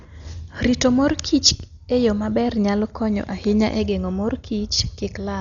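Throughout, the speech sounds dull and cut off above 7 kHz, with rough, fluttering noise around tones. This is likely heavy Dolby Digital compression, consistent with about 40 kbps.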